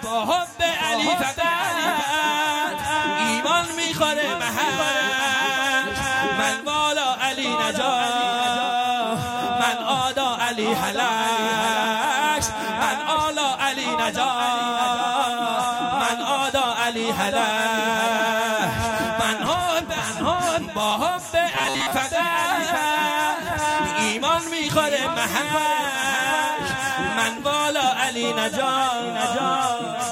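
At 19.46 to 19.54 s, loose connector crackle: an intermittent contact chops the signal into irregular scratchy pops, seen as jagged spikes on the waveform and broadband vertical streaks on a spectrogram. From 21.52 to 21.93 s comes a rigid metallic buzz at 134 Hz, likely robotic sound from repeated short buffers of about 7.5 ms looping while most of the real audio is skipped. On a spectrogram it shows evenly spaced horizontal harmonic lines.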